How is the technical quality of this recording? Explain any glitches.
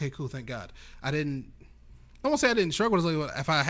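There are no glitches to explain. The speech shows the ordinary character of a WebRTC call path, with nothing heard above 8 kHz, which fits a G.722 call codec working as designed.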